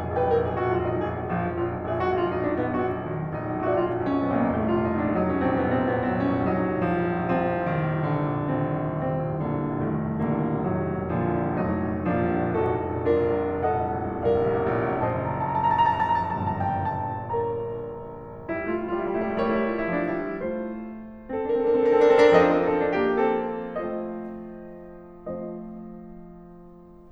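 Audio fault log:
Nothing in the music stood out as a fault on listening.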